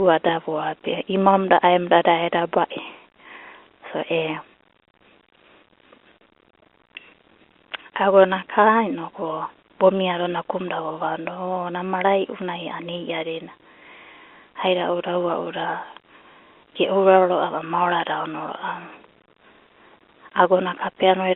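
No technical faults can be heard in the speech, which comes over a normal telephone path using G.711 mu-law coding at 64 kbps, so its audible range sits within about 250 Hz to 3.4 kHz, as expected for a landline.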